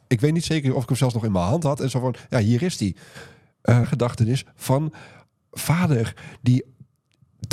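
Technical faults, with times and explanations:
3.83–3.86 s, stream segment skipped: the speech jumps abruptly ahead with a brief blip, and the continuation does not follow on from what came before. A segment of the stream likely failed to load, so the player skipped it. Unlike a dropout, there is no silent gap.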